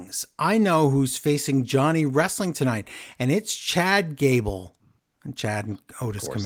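No technical faults can be heard at any point in this speech. Nothing in it needs a timestamp or a second listen.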